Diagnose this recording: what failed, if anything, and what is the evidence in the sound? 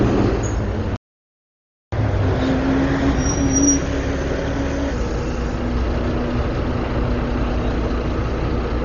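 Dolby Digital compression, throughout the clip. Nothing above 7 kHz, so the audio is dull, and the tonal parts carry a rough, fluttering noise. This is a codec-stage fault. The cause is likely an AC-3 family encoder starved of bits, which fits a rate around 32 kbps. The encoder narrowed the band and left many frequency lines with no mantissa bits. The decoder then filled those empty lines with dither noise, producing the flutter.

Playback stall, from 0.96 to 1.92 s. The audio cuts out mid-flow into silence for just under a second, about 963 ms, and then resumes. This points to the driver, buffer or playback stage rather than the recording itself. The most likely cause is that the player's buffer ran dry or its output thread was blocked. Nothing reached the converter until the player recovered and picked up again.

Catch-up at higher speed, from 1.92 to 4.92 s. Immediately after the gap, the audio runs fast at 1.15 times normal speed for three seconds. 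Pitch rises by roughly two semitones along with it, then both settle back to normal. This is playback-stage behaviour. The player resampled its backlog to recover some of the time lost in the stall, and because resampling changes speed and pitch together, the whole stretch sounds faster and higher.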